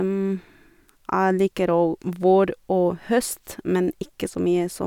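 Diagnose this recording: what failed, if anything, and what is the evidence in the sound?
Nothing failed: no stage of the chain, from wiring through to playback, leaves any audible mark on the speech, so there is no fault evidence to report.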